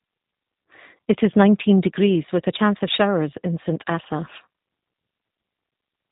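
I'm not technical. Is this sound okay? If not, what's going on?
No. From start to finish the speech sounds slightly rough and synthetic, and it has a muffled, phone-line quality because nothing above about 3.8 kHz comes through. That is the G.729 codec, a low-data calling format that rebuilds each voice from a simplified model rather than sending the real sound.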